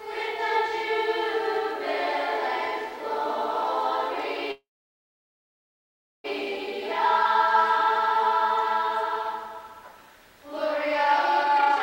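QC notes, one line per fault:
4.51–6.26 s, call audio freeze: a brief fading buzz, then 1.6 s of silence, likely from delayed packets draining the jitter buffer. Audio resumes intact, just late.
11.43–11.83 s, jitter buffer speed-up: playback runs at 202% speed with unchanged pitch. Short pitch-period slices are cut repeatedly, removing roughly 0.4 s of buffered delay.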